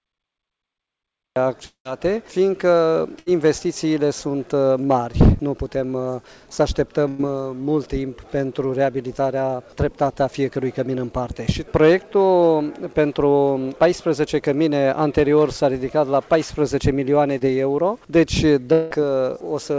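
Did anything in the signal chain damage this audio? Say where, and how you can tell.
Yes. The damage is at the capture and network stages.

Cut-off start. The file holds digital silence until 1.36 s. Then the sound appears, already in progress. There is no rising attack and no fade-in. That is the signature of a recording or stream that began late. Capture started after the sound did, so its opening was never recorded. The abrupt step from silence to signal is the tell.

Long network dropout. At 1.66 to 1.87 s, the last sound is stretched into a fading buzz or hiss. That fill gives way to roughly 100 ms of silence. About 200 ms of material is gone when the audio returns. At 18.73 to 18.92 s, a similar stretch of about 180 ms is lost. Here the fill fades without reaching silence. These are likely network dropouts, with the receiver improvising over the gap.

Burst of packet loss. Two shorter holes occur. 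The first is at 3.19 to 3.28 s, losing 80 ms. The second is at 7.08 to 7.21 s, losing 100 ms. In each, the preceding sound is held and turned down as the gap goes on. The audio then resumes further ahead, and the middle section is missing. Several consecutive packets failed to arrive in time for playback.

Short concealed packet loss. At 17.39 to 17.43 s, there is a brief smear. About 20 ms never reached the decoder. The receiver extrapolated from the last sound and blended back into the real signal. The result is a small wobble rather than a gap. All of this passes through a G.722 call path at 64 kbps, which leaves nothing above 8 kHz.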